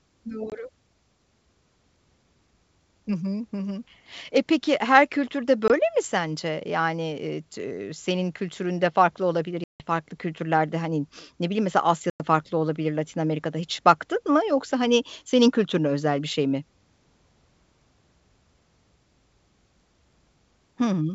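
Packet loss on an ADPCM call cuts hard-edged silent holes at 0.50 s, 5.68 s, 9.64 s (about 160 ms, after "senin kültüründe farklı olabilir") and 12.10 s (about 100 ms, before "farklı olabilir"). The G.722 wideband decoder's predictor loses step, so the speech resumes with brief distortion.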